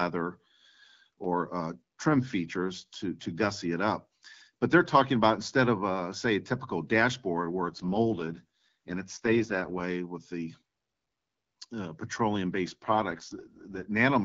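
From 7.66 to 9.84 s, after "a typical dashboard where", and again from 12.67 to 13.86 s, after "uh petroleum", the speech turns rough and synthetic with no gap or band loss. This is an AMR rate drop, which fits the wideband codec falling from 12.65 to 6.6 kbit/s.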